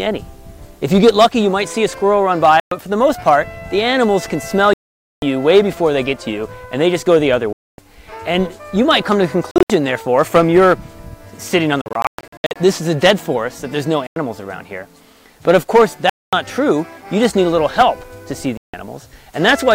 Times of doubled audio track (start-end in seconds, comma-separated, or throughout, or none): none